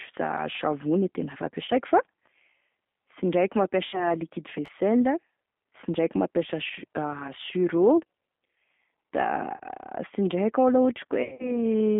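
Throughout the speech runs through a G.729 codec at 8 kbit/s. The line passes only about 200 Hz to 3.5 kHz, but a simple band-limit alone would not add the slightly rough, synthetic texture heard here. That texture comes from each 10 ms frame being rebuilt from a vocal-tract filter, a pitch predictor and a handful of pulses, and the damage is plainly audible.

VoIP packet loss concealed by the speech codec first appears at 1.66 to 1.69 s, with about 20 ms of audio missing, and again at 3.85 to 4.09 s, where 80 ms is lost. The decoder stretches the last pitch and filter into a buzzy tone or coloured noise that fades, and the voice stays weak for a moment after the sound returns.

At 4.66 to 4.68 s the chunks are out of order. A block of about 11.6 ms plays one chunk late. Nothing is missing and nothing is extrapolated, so there is no buzzy fade as with concealment. What you hear is a brief jumbled stutter with three hard joins.

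The concealment returns at 9.57 to 9.61 s, covering about 30 ms. It is heaviest at 11.23 to 11.59 s, where about 130 ms of gaps are scattered over 160 ms, the longest run being 70 ms. The result is a stretch of repeated decaying fill, with the voice weak or distorted after the gaps.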